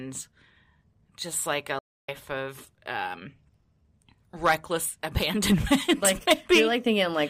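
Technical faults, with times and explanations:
1.79–2.09 s: playback stall. The speech drops to silence for 0.29 s after "just like a" and resumes at "of um", likely because the player's buffer ran dry.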